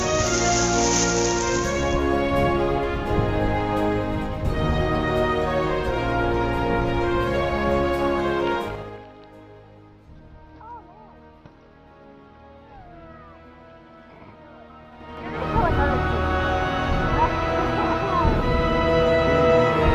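A level change applied in coarse 3 dB steps without smoothing causes zipper noise from 8.58 to 9.08 s, as the level drops roughly 20 dB, and again from 14.88 to 15.48 s, rising about as much. Each step adds a faint click, producing rapid ticking.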